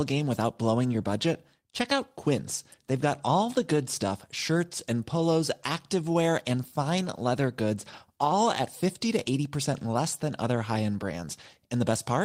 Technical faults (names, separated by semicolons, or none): none